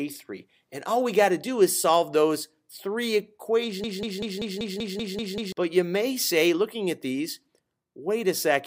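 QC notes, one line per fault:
3.84–5.52 s, broken-record loop: a 0.19 s fragment of sound repeats nine times back to back, stuttering identically for about 1.7 s while the material that belonged there never plays, likely from a stalled player, encoder or stream resending its last held buffer.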